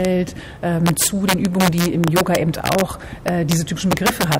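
The sound suffers from integer overflow throughout: gain runs about 5 dB too hot, and around one percent of samples exceed the integer limit and wrap to the opposite sign instead of being limited, so the loudest peaks become harsh cracks far sharper than ordinary clipping.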